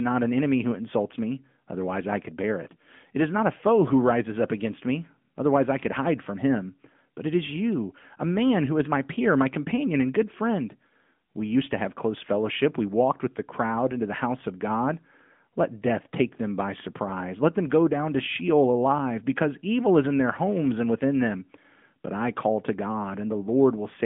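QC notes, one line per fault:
Throughout: AMR narrowband mobile codec. The speech has passed through a 2G/3G-style mobile speech coder that samples at 8 kHz and rebuilds the voice from a vocal-tract model excited by a few pulses per subframe. Energy stops near 3.7 kHz, and the band sits at about 150 Hz to 3.5 kHz, giving a thin, boxed-in phone sound. The plainly audible buzzy, synthetic edge fits a mid-rate mode around 10 kbps.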